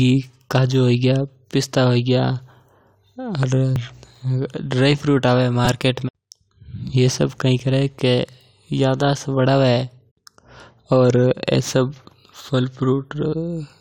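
Repeated buffer at 3.76 s and again at 5.65 s: new audio did not reach the playback device in time, so it replayed its last block of speech. Each repeat lasts about 5 ms, which fits a 256-sample buffer. At 3.76 s the block plays once more, giving a single click. At 5.65 s it plays three more times, so the hard joins run together into a brief buzz. No speech appears to be skipped.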